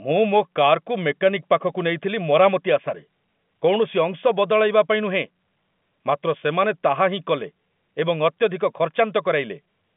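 No technical faults are audible.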